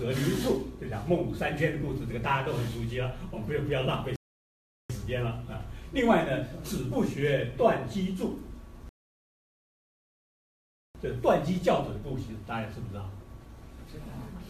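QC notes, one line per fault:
4.16–4.90 s, rebuffering stall: sound drops to silence for about 0.74 s, then resumes exactly where it stopped; playback ran out of downloaded audio and waited.
8.89–10.95 s, rebuffering stall: a longer silent gap of about 2.06 s, picking up seamlessly afterwards; the player's buffer emptied and paused until more data arrived, adding time without losing any audio.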